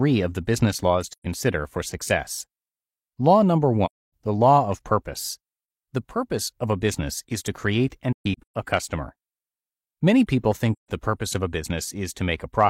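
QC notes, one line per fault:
1.12–1.26 s, 3.85–4.12 s, 8.12–8.55 s, 10.72–10.91 s: AAC frame loss with muting. Runs of frames never arrived, and the decoder zeroed their spectrum. The overlapping windows fade the speech down and back up, leaving soft-edged holes. The holes fall after "of the business laws", before "the law of purpose", and after "business is to create". Most last about 0.13–0.30 s. The one at 8.12 s is split into scattered gaps, the longest roughly 0.15 s.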